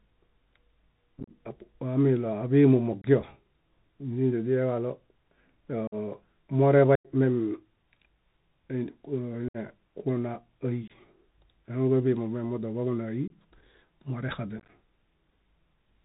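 Bluetooth CVSD headset codec runs through the whole speech clip, and its damage is plainly audible. The link encodes each sample as a single up-or-down bit with an adaptive step, so nothing above 4 kHz survives. Loud, bright sounds outpace the step and distort, s sounds come out scratchy, and a grainy hiss sits beneath the speech throughout.

Unconcealed Bluetooth headset packet loss strikes at 1.19–1.30 s, 3.02–3.05 s, 5.87–5.94 s, 6.95–7.07 s, 9.48–9.57 s, 10.88–10.92 s, 13.28–13.31 s and 14.59–14.69 s. At each point, short voice packets between headset and phone went missing and were left as silence or an idle pattern rather than filled in. The longest hole is about 94 ms at 6.95 s. At 1.19 s and 14.59 s the gaps are broken into several brief dropouts, so the speech sounds chopped and crackly. The holes have abrupt edges, and the speech returns briefly quieter.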